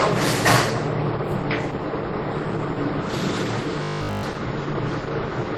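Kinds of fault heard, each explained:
Transcoding between lossy codecs: The audio likely passed through two lossy codecs. Low-rate artefacts, which fit something like Opus at 16 kbit/s, sit under WMA-style coding. Unlike a single low-bitrate encode, two distinct artefact types are heard layered together.
Robotic sound from repeated short buffers: From 3.83 to 4.23 s the sound becomes a rigid metallic buzz at 50 Hz, likely from a 20 ms block being replayed throughout while new audio is skipped. Unlike stutter or dropouts, it forms a steady fixed pitch rather than audible gaps.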